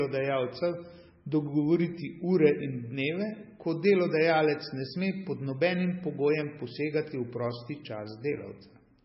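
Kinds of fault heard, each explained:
MP3 compression: heard throughout the speech, with nothing above 5.6 kHz and a heavily watery, swirling texture on the s sounds, which is likely the work of an MP3 encoder starved of bits. At a budget fitting roughly 17 kbps, the encoder sacrifices the treble at a fixed cut-off and discards weaker frequency lines, which then blink in and out between frames. This produces the warbling, metallic chirps and smeared consonant onsets.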